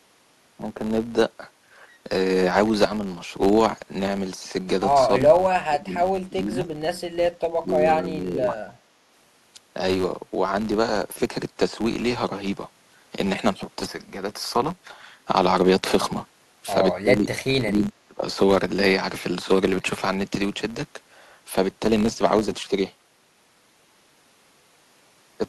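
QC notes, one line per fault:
Throughout, filter restarted on every block: a filter clears its state at each block boundary and restarts from silence, so every block opens with a small transient. These form a steady tick-buzz at about 93.8 Hz, which fits a 512-sample block, and rise and fall with the speech level.
5.20–5.34 s, 5.52–6.63 s, 7.59–8.73 s, 17.01–17.41 s, 17.61–18.23 s, speech suppressed in double talk: the echo canceller likely mistook overlapping talk for its own echo and ducked the near voice. The speech dips by roughly 10 dB at first, then by as much as 30 dB, and drops out in chunks of up to about a second.
17.83 s, echo leak: the far end's echo canceller likely failed to remove all of the loudspeaker sound reaching its microphone, so a scrap of it returned. A brief delayed copy of the speech, 314 ms late and around 15 dB below the direct voice, is audible inside the suppressed stretch.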